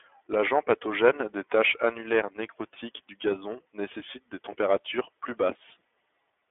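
Throughout the speech, the iLBC codec shapes the sound. It codes each 30 ms frame on its own, without drawing on the frame before. The line passes roughly 300 Hz to 3.5 kHz, and nothing is heard above 3.7 kHz. So the speech sounds narrow and muffled. The codec damage is plainly audible. Voiced sounds turn rough and slightly synthetic. This sound fits the 13.33 kbps mode.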